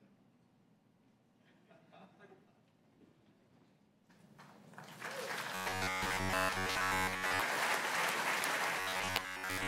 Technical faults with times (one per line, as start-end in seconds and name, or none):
5.55-7.42 robotic sound from repeated short buffers
8.80-9.68 robotic sound from repeated short buffers